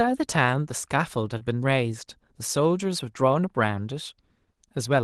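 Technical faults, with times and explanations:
1.37–1.41 s, short concealed packet loss: about 20 ms of call audio arrived too late, so the receiver extended the preceding sound and blended back, heard as a brief smear. The waveform shows the preceding sound continued, not a gap.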